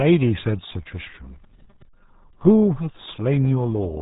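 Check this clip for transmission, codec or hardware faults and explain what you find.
One codec fault runs through the whole clip: RealAudio 14.4 coding. Throughout the speech, the signal has been squeezed through RealAudio 1, a dial-up era speech codec working at a very low bitrate, consistent with about 8 kbit/s. To fit that budget it discards everything above 3.8 kHz and models the rest coarsely, with heavy damage. The result is muffled, band-limited speech with a gargly, watery texture and no crisp consonant detail.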